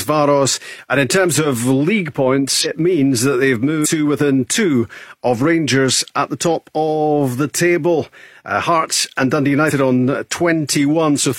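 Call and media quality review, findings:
Compressed frames skipped at 2.60–2.66 s, 3.81–3.87 s and 9.66–9.72 s. The speech jumps ahead by about four frames (roughly a fifth of a second) at the first two points and by one frame at the last. The jump fits a 46.4 ms codec frame. This points to the decoder dropping missing or damaged frames. On a spectrogram, the harmonic tracks break abruptly. On the waveform, the envelope jumps.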